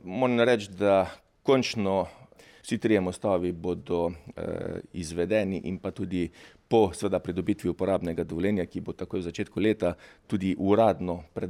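Nothing stood out as technically wrong on listening.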